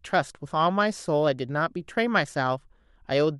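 A short bit of speech, and nothing in it sounds technically wrong.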